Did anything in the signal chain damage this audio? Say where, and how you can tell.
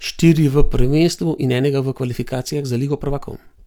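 Yes. A time-stretched section runs from 0.97 s to the end, likely from software in the processing or playback stage that compressed the audio to fit a shorter slot. It plays about 1.43 times faster while the pitch holds steady, so the speech abruptly becomes rushed at 0.97 s. The stretcher keeps pitch by dropping short slices of the waveform.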